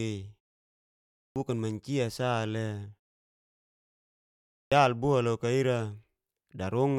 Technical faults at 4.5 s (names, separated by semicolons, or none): clipped start after a pause